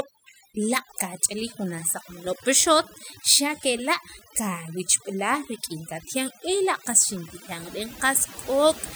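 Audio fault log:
throughout, overdone noise removal: the background drops and breaks up into twinkling specks. Noise reduction pushed too hard cuts individual frequency bands whenever they sit close to its noise estimate, stripping away quieter parts of the speech along with the noise.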